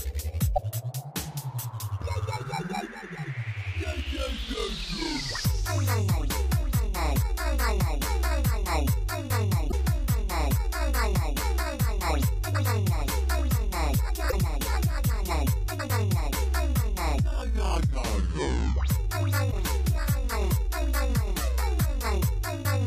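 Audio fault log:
0.54–0.59 s, 9.68–9.74 s, 14.28–14.33 s, 19.48–19.53 s: damaged data in a compressed stream. Each event is a brief chirp, squawk, click or short hole of about 55 ms, cutting across the surrounding sound. Corrupted bytes in the encoded stream cause the decoder to misread or discard the affected frames, producing garbled output until it regains sync at the next valid frame header.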